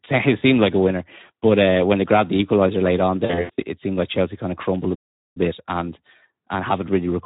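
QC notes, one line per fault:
throughout, Speex codec: the speech is hoarse and grainy, with a noisy edge. That fits Speex at a low-to-middle setting near 11 kbps. It differs from packet-loss damage because it never lets up.
3.25–3.61 s, VoIP packet loss concealed by the speech codec: after "the equaliser late on", scattered gaps totalling about 220 ms across 320 ms, the longest 80 ms, are filled with buzzy, stretched, fading sound. The decoder extrapolates each lost stretch, and the voice stays weak until "it seemed like".
4.95–5.37 s, playback stall: after "kind of crumbled a", the output drops to dead silence for about 407 ms, then resumes with "bit and and", picking up where it stopped. This is likely the player running out of data. Unlike concealment, nothing fills the gap and nothing fades.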